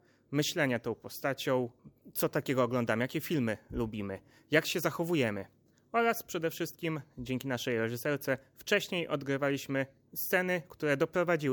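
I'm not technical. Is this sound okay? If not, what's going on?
Yes, nothing is wrong here.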